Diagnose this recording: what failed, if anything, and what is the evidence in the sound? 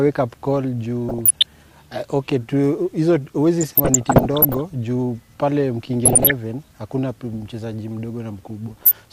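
Burbling blips break through the sound in four bursts, at 1.09 to 1.62 s, 3.61 to 4.60 s (the longest and roughest), 6.05 to 6.31 s and 8.69 to 8.92 s. This is DAB burbling from the reception and decoding stage. Weak reception let residual bit errors, somewhere under one percent, slip past error correction into the MP2 stream, corrupting samples, which put short blips of noise into single sub-bands, and scale factors, which make sub-bands leap in level for up to a frame.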